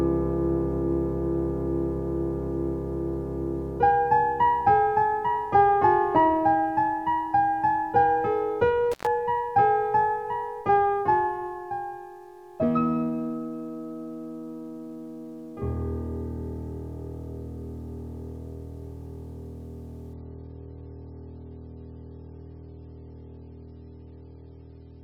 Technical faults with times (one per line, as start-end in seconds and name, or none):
8.92-9.06 intermittent contact
20.14-25.04 adaptive stream at a lower bitrate